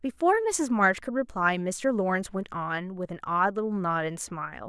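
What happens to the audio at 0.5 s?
Nothing goes wrong at 0.5 s; the speech there is intact, with no dropout, click, distortion or other fault.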